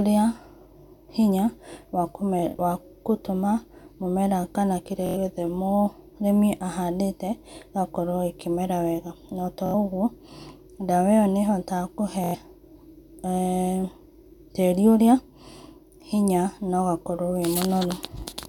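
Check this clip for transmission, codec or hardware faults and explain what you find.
The clip has four Bluetooth stutter events, at 2.39–2.59 s, 5.06–5.17 s, 9.66–9.74 s and 12.24–12.35 s. Packets on the wireless link arrived late or not at all, so the receiver looped its last short buffer of this speech until data returned. Each gap of about 70 ms or 93 ms is heard as a quick stutter, then the speech resumes further on, with that stretch skipped. At 2.39 s the losses are scattered over about 186 ms, the longest run about 23 ms.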